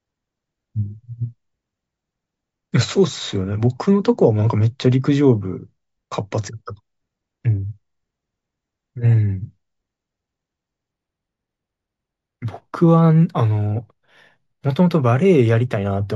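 From 10.92 s to the end of the speech, imaging from linear upsampling appears. The sound points to a 16 kHz source raised to 44.1 kHz by straight-line interpolation, which filters poorly. The top of the original band dulls, and a faint mirrored copy of the spectrum folds into the 8 to 16 kHz region, roughly 45 dB below the speech, adding a light metallic shimmer to sibilants. A spectrogram shows a dim inverted reflection above 8 kHz.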